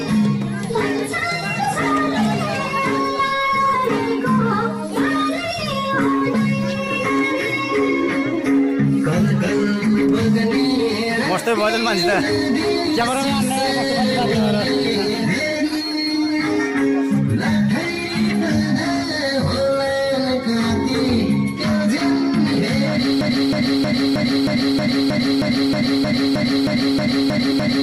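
The audio has two separate problems. First, compressed frames skipped: at 13.0 s the playback jumps ahead by about 40 ms, which fits a couple of whole frames going missing or being rejected by the decoder as damaged. There are smaller jumps at 26.04 s and 27.51 s, the last worth about one frame. Second, from 23.21 s to the very end there's a broken-record loop. A fragment about 315 ms long repeats back to back, 15 times in all. That's likely the player, encoder or stream stalling and resending the last piece it had buffered. Everything that should have played in those final seconds is gone, and the later frame skips land inside the repeating stretch.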